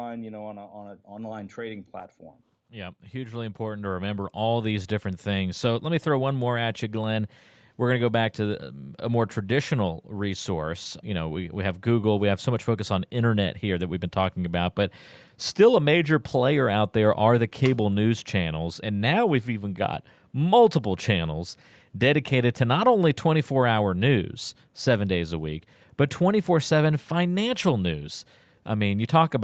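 Speech recorded over a call, where the automatic gain control judged the input too quiet and raised its gain, so voice and background swell together by about 16 dB from 0.72 to 5.69 s, just before "let me throw one"; the sound stays band-limited to 8 kHz throughout.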